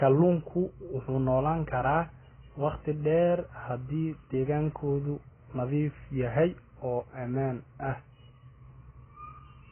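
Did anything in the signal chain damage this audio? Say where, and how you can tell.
Yes, at the codec stage, and it runs the whole way through the speech. Nothing comes through above about 3.1 kHz, so it sounds dull and boxed-in, and the sibilants and held vowels pick up a warbly, fizzy smear. That's heavy AAC compression, likely AAC-LC squeezed down to something like 12 kbps. At that rate the encoder drops the top end entirely and starves the remaining bands, leaving gaps or noise-filled patches in the spectrum.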